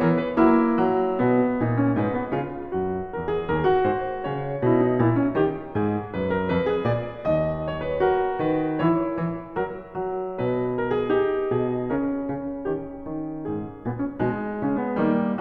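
Nothing stood out as a technical fault on listening to this music.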